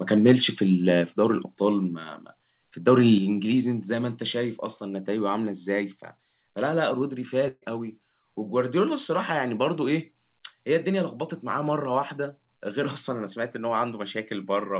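Microphone overload at 0.28 to 0.32 s puts a harsh crackle on the speech, with peaks about 2 dB over the converter's limit and several percent of samples flattened, likely from input gain set too high. Microphone volume stepped down at 1.02 s by about 3 dB and again at 3.18 s by about 6 dB, with speech and background dropping abruptly together, likely the call software lowering the device input after that distortion. A burst of packet loss from 7.48 to 7.64 s replaces about 140 ms of audio with roughly 135 ms of continued, fading sound and about 20 ms of silence before speech resumes further on. Throughout, the band stops at 4 kHz, consistent with a G.711 call codec at 64 kbps.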